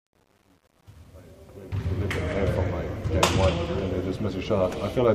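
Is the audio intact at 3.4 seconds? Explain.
Yes, the audio is intact at 3.4 seconds, with no fault at that moment.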